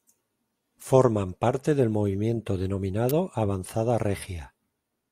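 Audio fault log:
3.09 s electrical switching spike: sharp snap peaking around -5 dBFS, likely arcing from a nearby switch; needle-thin waveform spike, broadband vertical line on the spectrogram.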